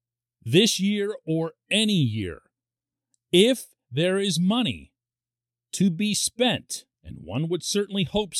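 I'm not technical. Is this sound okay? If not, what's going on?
Yes, no faults here.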